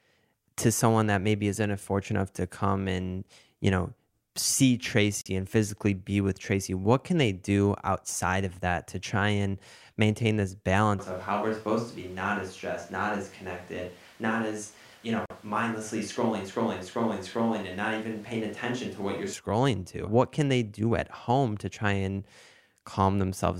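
Speech, with two technical faults. There is a gap between chunks at 5.21 to 5.26 s and again at 15.26 to 15.30 s. Each 44 ms hole lands 10 s apart, pointing to chunked delivery. From 10.99 to 19.33 s the sound turns hollow and roomy, roughly 5 dB quieter, with more background noise. This is likely a switch to a distant microphone.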